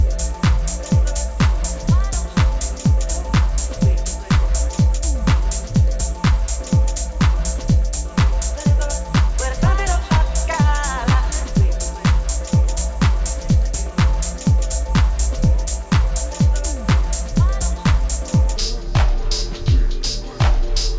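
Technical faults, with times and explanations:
18.56 to 20.98 s, wrong sample rate: the end drags at two-thirds speed and drops about 7 semitones, consistent with 24 kHz audio played back at 16 kHz.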